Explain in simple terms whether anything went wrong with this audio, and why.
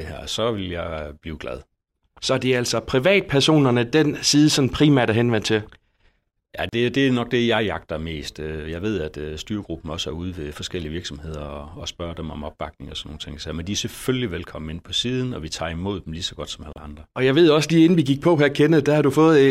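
Two brief dropouts interrupt the speech: a gap of about 37 milliseconds at 6.69 s, just before "det det er nok", and one of about 31 milliseconds at 16.73 s, right after "lige så godt som". Each is a gap at a join of encoded pieces. The recording was compressed in roughly 10-second chunks and stitched together untrimmed, so the encoder's built-in start silence and end padding remained at each seam. The speech briefly halts, then resumes exactly where it left off.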